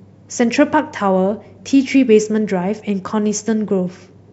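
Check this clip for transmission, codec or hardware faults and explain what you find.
Listening through the speech in this clip turns up no transmission, codec or hardware fault anywhere in the signal.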